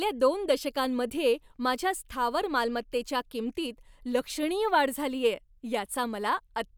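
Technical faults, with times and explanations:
No technical faults are audible anywhere in this recording.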